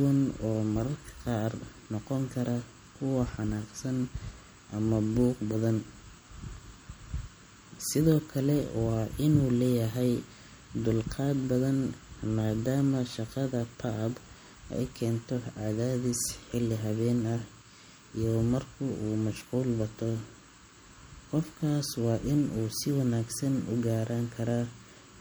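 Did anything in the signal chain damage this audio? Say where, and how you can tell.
Yes, at the codec stage: the speech sounds watery throughout, likely MP3 compression near 64 kbps. A spectrogram shows flickering gaps.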